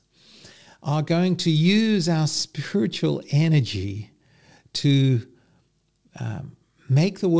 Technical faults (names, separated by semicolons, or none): none